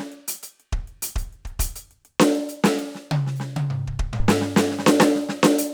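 At 4.20 s a phantom power thump hits the music: a deep, sudden low-frequency blow peaking around -11 dBFS. It dies away within about 29 ms, where a handling bump would roll and rumble.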